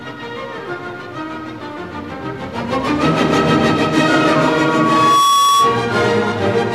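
From 4.44 s to 5.94 s comes a loudspeaker feedback squeal. The microphone re-amplifies its own loudspeaker, so a lone tone near 1.1 kHz swells over roughly 0.7 s to sit a few decibels above the sound. That self-building rise distinguishes it from a steady interfering whistle.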